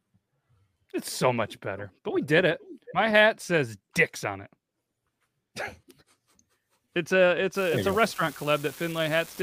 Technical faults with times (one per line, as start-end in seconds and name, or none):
7.54-9.43 unreliable data bit